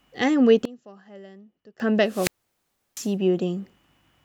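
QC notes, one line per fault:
0.65–1.80 s, one channel inverted: the speech drops by about 23 dB and turns faint, with the centred voice largely gone. This is likely a polarity flip on one stereo side, so the shared content cancels when the channels are folded to mono.
2.06–3.14 s, wireless microphone squelch dropout: hiss and static swell as the speech fades, then the output mutes to near silence for about 0.70 s before the speech returns. The analogue FM radio link weakened until the receiver's squelch gated the signal off.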